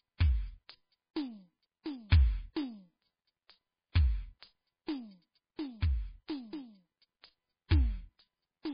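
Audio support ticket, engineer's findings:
Music, whole clip: nothing above 5 kHz, watery swirl, smeared attacks. Likely MP3 compression, heavily starved, consistent with roughly 16 kbps. Encoder zeroing weak lines frame to frame; unlike a plain low-pass, the top end also churns.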